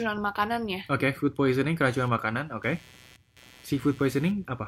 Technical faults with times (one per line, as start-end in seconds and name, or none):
1.51-4.68 computer activity noise